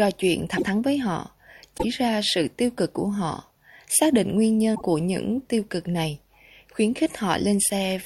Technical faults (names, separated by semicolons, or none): broken MP3 bit reservoir